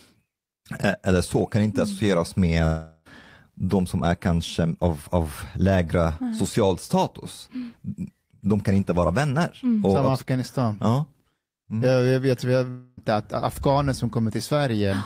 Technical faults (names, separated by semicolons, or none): long network dropout